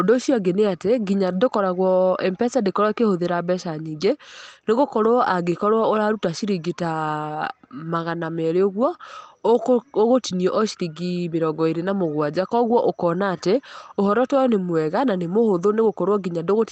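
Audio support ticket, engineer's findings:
Nothing stood out on listening to this speech clip, which reaches the listener over the WebRTC call path.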